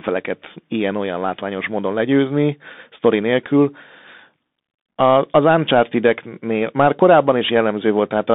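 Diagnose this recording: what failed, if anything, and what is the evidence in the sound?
The failure sits at the codec stage: the speech has passed through a Bluetooth CVSD headset codec for the whole clip. The band runs only from about 200 Hz to 3.7 kHz, so everything above is missing and the sound is dull and boxy. A granular hiss sits under the speech, and sibilants turn scratchy. That fits a 64 kbps one-bit delta stream whose adaptive step cannot keep pace with fast, loud high-frequency movement.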